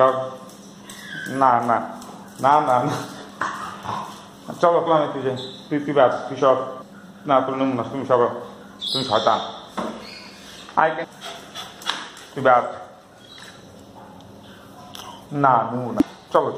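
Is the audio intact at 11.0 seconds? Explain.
No. At 11.03 s there is a brief burst of damaged data in the compressed stream, lasting about 16 ms. Corrupted bytes there leave the decoder unable to read the frame correctly, so it loses sync and hunts for the next valid frame header, producing a short chirp, squawk, click or hole.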